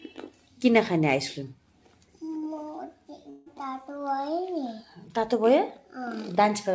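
A call recording limited to 8 kHz by its G.722 path. From 3.30 to 3.48 s the audio smears into a fading buzzy continuation, then resumes with that stretch gone, likely a long network dropout concealed for about 160 ms.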